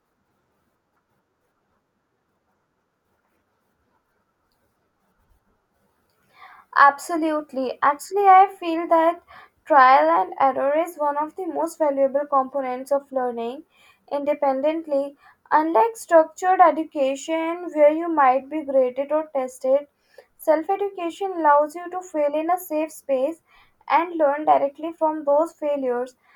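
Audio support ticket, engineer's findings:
Listened through the speech recording in full; nothing stood out that would point to a fault in the capture or playback chain.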